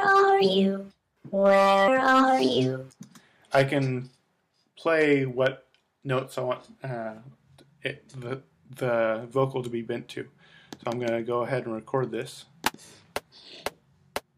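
A stage in the chain is being driven past its ceiling, so peaks are sheared flat: hard clipping from 0.08 to 0.45 s and 4.93 to 5.47 s at about 3 dB over, and from 1.45 to 2.46 s and 3.55 to 3.78 s at about 6 dB over, adding high harmonics heard as crackle on the peaks.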